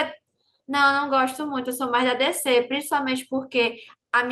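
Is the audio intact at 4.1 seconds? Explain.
Yes, at 4.1 seconds the speech plays through intact, with no dropout, click, distortion or other fault at that moment.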